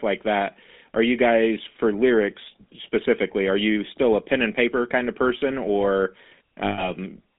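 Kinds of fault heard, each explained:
GSM full-rate codec: The speech has a buzzy, gravelly roughness throughout and sounds thin, confined to a line band of roughly 250 Hz to 3.7 kHz. The codec rebuilds the voice from a vocal-tract model driven by sparse, regularly spaced pulses, which fits 13 kbps full-rate coding.
Lost GSM frames: From 6.64 s to 6.89 s the speech turns into a rough, metallic ring before recovering. Missing frames were filled by repeating the last good frame's settings, which points to about 140 ms of lost audio.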